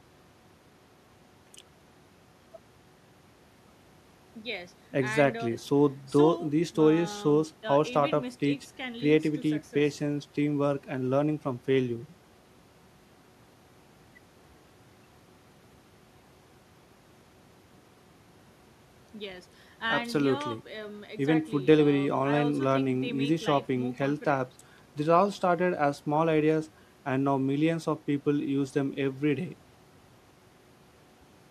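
No technical faults can be heard in the speech.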